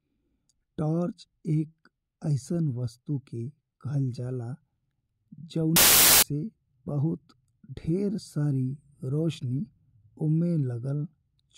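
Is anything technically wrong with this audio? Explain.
Yes. Samples built from the wrong bytes appear from 5.76 to 6.23 s, about half a second of the speech. During that stretch the bytes of each sample are assembled incorrectly, whether shifted by one byte, swapped in order or read with the wrong alignment, so the rapidly fluctuating low-order bits end up as the most significant part of each value. The result is a burst of loud, harsh broadband noise replacing the speech, close to white on the louder sounds.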